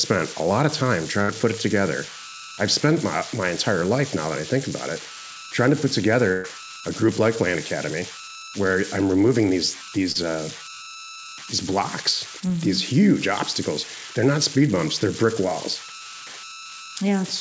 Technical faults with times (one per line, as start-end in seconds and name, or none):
0.00-17.41 converter idle tones
1.22-1.30 burst of packet loss
6.32-6.46 burst of packet loss
10.12-10.23 short concealed packet loss
12.40-12.44 short concealed packet loss